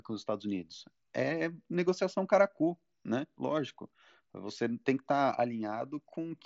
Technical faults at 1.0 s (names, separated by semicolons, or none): none